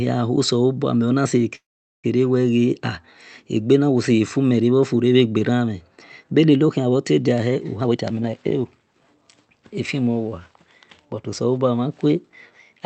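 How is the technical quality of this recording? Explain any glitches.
Two glitches stand out in this call recording, which carries the band limit and coding noise of a call codec with audio up to about 8 kHz.

From 1.55 to 2.06 s there is a call audio freeze. Sound stops for about 0.43 s, then resumes where it left off. Delayed packets likely emptied the jitter buffer.

From 7.77 to 9.29 s there is a jitter buffer speed-up. Speech runs at about 131% speed at unchanged pitch, sounding hurried, as the receiver trims roughly half a second of built-up delay.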